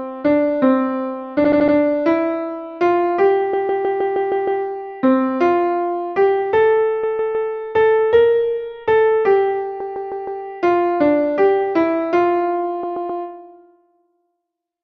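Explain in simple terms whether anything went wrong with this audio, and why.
Repeated frames: at five points, a short run of the compressed audio was sent or saved more than once, so the player ran the same slice again. You hear a stutter, a fraction of a second looping. It happens at 1.44–1.75 s (a 78 ms slice, four extra times), 3.53–4.63 s (157 ms, seven times), 7.03–7.50 s, 9.80–10.43 s (both 157 ms) and 12.83–13.22 s (131 ms). Each loop stretches the audio longer.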